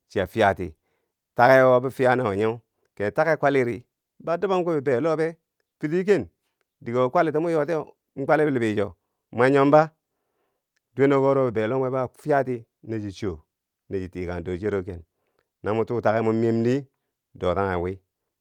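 No technical faults can be heard anywhere in the speech. There is nothing to place on a timeline, as no moment stands out as faulty.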